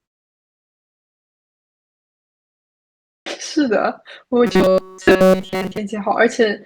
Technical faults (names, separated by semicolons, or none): clipped start after a pause; robotic sound from repeated short buffers